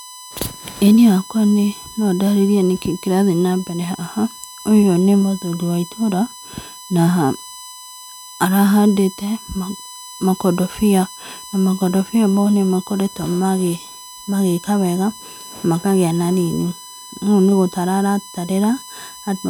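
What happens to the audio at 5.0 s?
At 5.0 s the speech carries a USB whine, a steady tone at 1 kHz that runs through the whole clip rather than starting there, sitting about 20 dB below the speech. The USB bus draws current in 1 ms frames, and that pulsing leaks into the audio through shared power or ground, producing a fixed pitch at exactly the frame rate. Mains hum would instead be a low 50 or 60 Hz buzz, not a high, thin tone.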